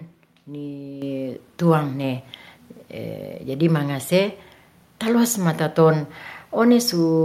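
At 1.02 s the microphone volume stepped up: the call software judged the input too quiet and raised the device's input level in a single jump of about 8 dB. Because the change happens at the microphone, the speech and the background noise both get louder together at that instant. On a waveform the envelope widens abruptly at 1.02 s, and a spectrogram shows every band, noise floor included, brightening at once.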